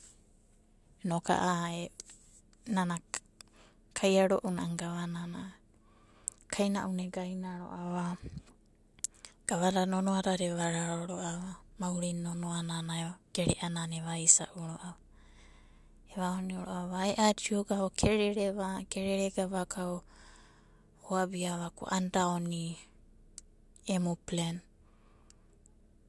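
Listening through the speech, nothing stood out as a technical fault at any point.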